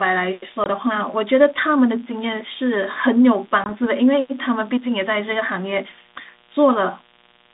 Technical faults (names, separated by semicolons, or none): mains buzz; packet loss on an ADPCM call